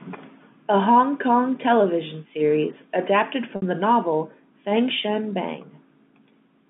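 At 3.56 to 3.62 s, between "television series adapted" and "the novel", a packet loss with pitch repetition fills about 60 ms, which fits three 20 ms packets. The receiver loops the last pitch period, giving a brief held, buzzy tone before speech resumes over the band-limited G.711 telephone line.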